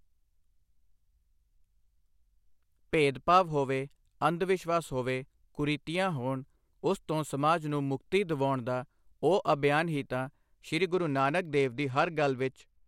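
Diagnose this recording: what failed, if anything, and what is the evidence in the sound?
Codec stage, over Bluetooth: an SBC bit pool drop. After "ਅਭਿਆਨ ਹੀ ਤਾਂ ਸੀ", from 10.89 s to the end, the treble dulls and grit rises. That fits a bit pool cut from 28 to 12, around 96 kbps, starving the top sub-bands and coarsening the rest.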